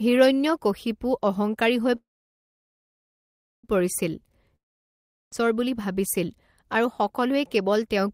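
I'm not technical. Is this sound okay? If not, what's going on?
No, there are two hiccups. At 1.95 s, right after "হিৰণ্যকশিপু অহঙ্কাৰী হৈ", there's a call audio freeze: the speech stalls and goes quiet for about 1.7 seconds until 3.65 s, then carries on exactly where it left off. Nothing is lost, it just runs late, likely because the call's data got held up on the way.

The second one, from 4.56 s to 5.34 s, is a long network dropout. After "হিৰণ্যকশিপু অহঙ্কাৰী হৈ পৰিছিল" there's roughly three-quarters of a second of near silence, then the speech picks up at "বুলি ভাবিছিল". This time that stretch is actually gone, likely because no audio got through during it.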